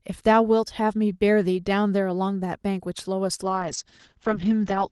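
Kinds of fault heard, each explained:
Call bitrate drop: from 3.44 s to the end, the call's encoder falls from 32 to 8 kbps, coding speech coarsely and narrowing bandwidth from 12 kHz to 8 kHz, sounding muffled and rough.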